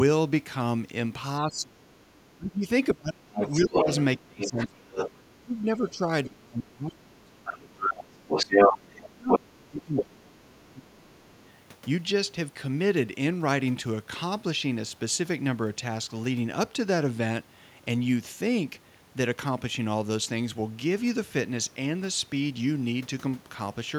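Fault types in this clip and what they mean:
Speech suppressed in double talk: from 1.4 to 11.22 s the speech repeatedly sinks or breaks up, around 30 dB down at its deepest and about seven seconds in total, likely an echo canceller ducking everything during overlap; unlike plain dropouts, the losses track the second voice.
Other side's voice leaking through: a second voice appears from 3.39 to 5.32 s slightly below the speech, from 6.93 to 10.55 s somewhat louder than it, and faintly at 11.26 to 11.5 s, likely loudspeaker echo the canceller missed.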